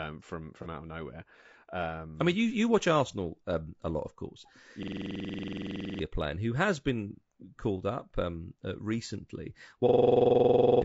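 Throughout, the speech sounds rough and grainy, with noise filling the gaps between harmonics and a thin, synthetic top band, likely from low-delay AAC compression (AAC-ELD) at around 32 kbps. On a spectrogram the harmonics look smeared.

From 0.62 to 0.67 s, just before "out of nowhere", AAC frame loss with concealment leaves a brief smeared, noisy patch. This fits one missing frame of about 30 ms rebuilt from the previous spectrum, and it shows as a blurred vertical smudge.

From 4.83 to 5.99 s, between "a lot of course" and "playing who has been", a system hang loop replays one 46.44 ms slice about 25 times. It makes a 21.5 Hz machine-gun stutter, consistent with a 2048-sample buffer, and roughly a second of audio is lost. The waveform shows identical repeating blocks.

The same hang loop returns from 9.89 to 10.82 s after "up um uh recently", with about 20 repeats of that 46.44 ms piece, visible as evenly spaced vertical stripes.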